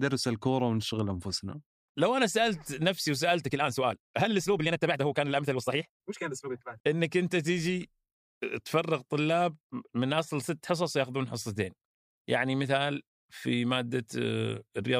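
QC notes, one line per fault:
3.43 to 6.89 s, time-stretched section: the speech abruptly runs at about 1.62 times its surrounding pace while its pitch stays unchanged, so this stretch sounds rushed before returning to normal speed. This is likely software compressing the segment to fit a shorter length, holding pitch by discarding short slices of the waveform rather than resampling, which would have raised the pitch along with the speed.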